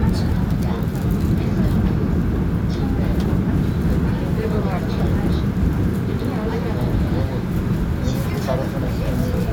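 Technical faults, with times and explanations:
No technical faults are audible anywhere in the recording.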